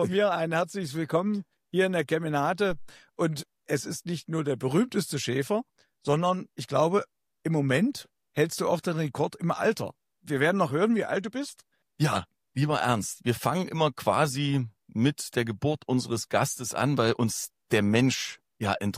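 At 2.70 s a phantom power thump appears. A supply switching on or off on the live input pushes a voltage step through the coupling capacitors, giving a deep thud that peaks at about -28 dBFS and decays within 48 ms, gone by 2.91 s. The waveform shows a lopsided low-frequency swing, and the spectrogram a brief smear along the bottom.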